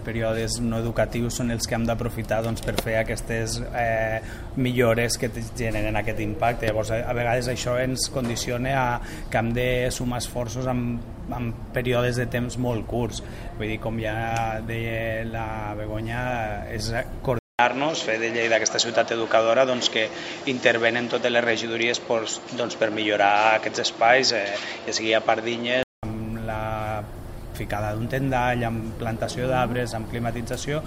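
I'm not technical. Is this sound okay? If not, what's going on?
No. From 17.39 to 26.03 s the sound goes dull and boxy, with a short gap of about 0.2 s at the change, a small shift in loudness and a faint new background noise. That's likely an input switched to a poorer device, such as another microphone.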